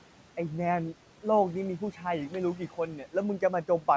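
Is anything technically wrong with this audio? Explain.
Yes. The noise suppressor cut into the speech twice, at 1.79 to 2.02 s and at 2.58 to 2.78 s. In each span it misjudged low-level speech energy as noise and pulled it down along with the background, by about 8 dB in the first and about 10 dB in the second. Roughly a tenth of a second of speech is hit in each span, and those parts sound swallowed and faint, as if syllable edges briefly drop out. The room noise sits about 20 dB under the speech, and the call path has nothing above 8 kHz, which fits G.722 at 64 kbps.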